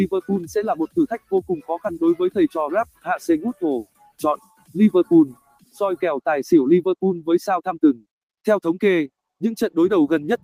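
A noise suppressor tuned for speech has been applied to music or sounds for the whole clip. It treats sustained material as noise and pulls it down, so level swings by around 10 dB as held parts sink and attacks pass, giving a pumping, thinned character.

The sound is cut by the noise suppressor at 2.85 to 3.06 s (about 14 dB), 3.85 to 4.2 s (about 18 dB), 4.37 to 4.75 s (about 15 dB) and 5.35 to 5.78 s (about 16 dB). Each dip lasts a few hundred milliseconds and audibly hollows out the sustain.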